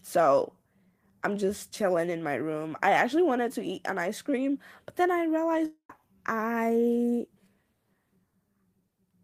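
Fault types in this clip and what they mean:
Long network dropout: just after "cream but then I", from 5.65 to 5.91 s the sound smears into a fading buzz before about 0.1 s of silence, likely from lost audio never recovered.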